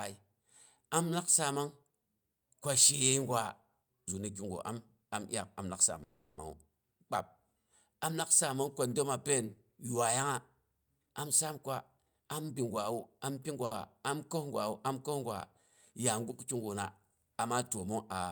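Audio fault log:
6.03–6.39 s, call audio freeze: the sound is held as a fading buzz for about 340 ms, then resumes where it stopped, likely from packets held up in transit.
11.02–13.56 s, jitter buffer speed-up: speech runs at 112% speed, same pitch, sounding hurried, as short pitch-period slices totalling about 0.3 s are cut to shrink excess buffering.
13.65–13.73 s, short stall from a late packet: a sound is stretched about 60 ms with a slight buzz while the missing packet arrives, then continues with nothing lost.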